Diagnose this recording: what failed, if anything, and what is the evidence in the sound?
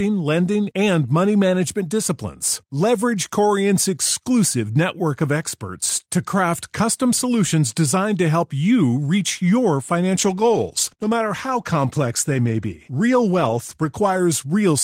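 Faint hiss rides louder, brighter speech throughout and vanishes in pauses: sample clock jitter at the converter, its timing wobbling by a microsecond or two.

From 10.19 to 14.27 s the speech turns rough and muffled: a call bitrate drop starved the codec, which fits about 15 kbps, coarsening detail and cutting highs.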